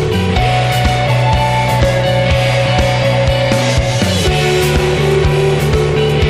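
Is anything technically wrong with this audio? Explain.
No, nothing in this audio points to a technical problem. The signal holds steady throughout, with no breaks or disturbances anywhere in the clip.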